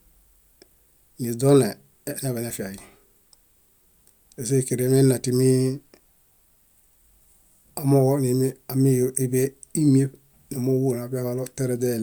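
No technical faults can be heard anywhere in the recording.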